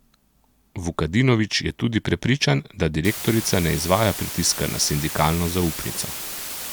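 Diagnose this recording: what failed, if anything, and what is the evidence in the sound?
From 3.05 s, just after "je tudi prepričan da", a steady, even hiss roughly 10 dB below the speech runs to the end, without distortion. This is low bit depth with dither from sample-format conversion: the speech is rounded to 5 bits, and the dither turns the rounding error into white noise.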